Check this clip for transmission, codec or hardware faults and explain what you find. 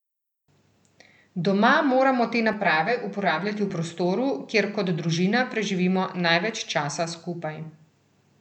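One fault is present: channel delay (comb filtering) from 2.53 to 3.7 s, between "moramo te" and "prostoru kjer kot družina". One channel lags the other by around 10 ms, and summing to mono cancels the shared content at evenly spaced notches starting near 50 Hz. This leaves the speech sounding hollow and phasey.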